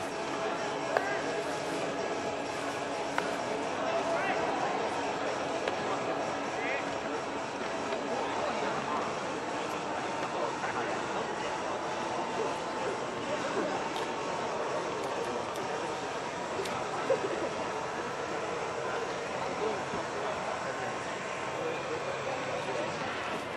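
Nothing stood out on listening; no technical fault could be heard anywhere in the audio.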